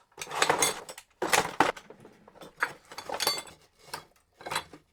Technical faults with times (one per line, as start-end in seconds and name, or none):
1.70 audio missing between chunks
2.60 audio missing between chunks
4.40 audio missing between chunks